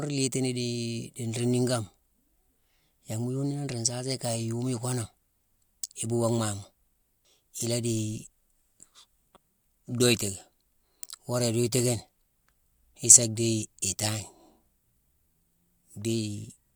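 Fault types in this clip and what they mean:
No fault types are present in this clip.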